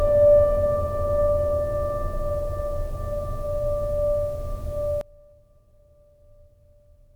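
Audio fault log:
5.01–7.16 s, one channel inverted: one stereo channel has likely flipped polarity, so when the two sides are summed to mono their shared content cancels. The music drops by about 24 dB, its centre nearly gone, leaving only a faint trace of what differs between the channels.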